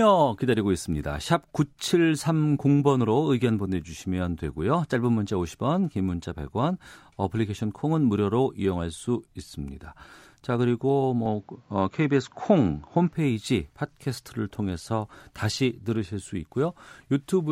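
Speech clip. From 11.26 to 13.13 s the sound turns duller, with nothing above 7.6 kHz and a faint new noise floor. The likely cause is the input switching to a poorer device, without a gap or level jump.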